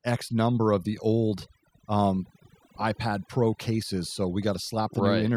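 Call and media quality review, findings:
Overdone noise removal throughout. Background near silent, with twinkling specks. Noise suppressor set too aggressive, cutting bands near its noise estimate, taking quiet speech detail too.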